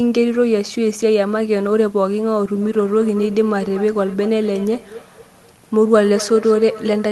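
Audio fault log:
2.62–7.11 s, feedback echo between two devices: the speech returns at a steady interval of about a fifth of a second, thinner and ringing, up to about 15 dB below the direct speech. A second device in the room plays the call back into this microphone, and the echo canceller cannot remove sound it did not play itself.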